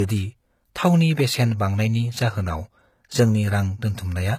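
Low-bitrate audio saved at a high bitrate runs through the whole of this speech clip, from start to finish. The speech carries the artefacts of a heavy first compression, and the final MP3 encoding at what sounds like a generous rate cannot remove them. The likely cause is an earlier pass through HE-AAC at around 20 kbit/s before re-encoding at about 192 kbit/s. The large file keeps every loss from that first stage and adds almost nothing of its own.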